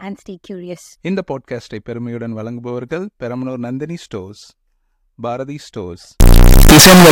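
From 6.2 s to the end at 7.1 s, the speech turns into a near-square blast at an almost fixed, high level, loud and harsh, with background noise as loud as the voice. It is likely a float read as integer, 32-bit float samples taken as 32-bit integers. Unlike clipping, the pitch still comes through.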